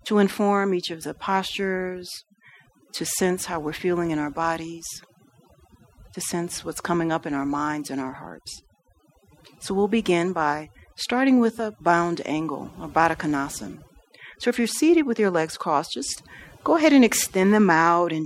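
From start to finish, there's overdone noise removal: the noise reduction was pushed too hard, so bands near its noise estimate get switched off, taking quiet speech detail with them. The background drops and breaks up into twinkly specks.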